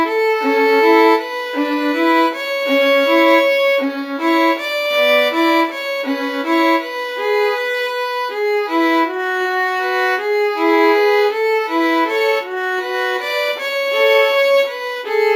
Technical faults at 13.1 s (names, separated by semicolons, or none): imaging from linear upsampling